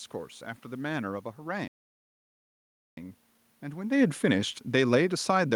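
At 1.68 s the player likely ran short of data or had its thread blocked, a playback stall: the speech cuts to silence for about 1.29 s, resuming at 2.97 s. From 3.81 s to the end at 5.55 s, automatic gain falling sets in as the control judges the input too loud or its background noise too strong and lowers its gain, so the speech and its room noise sink together. The talker also shifts position around 4 s.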